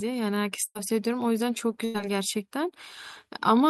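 At 0.65 to 0.77 s and again at 1.85 to 2.06 s the speech hits a burst of packet loss. About 100 ms went missing each time, and the receiver stretched the last sound into a fading buzz or hiss for roughly 90 ms before jumping ahead.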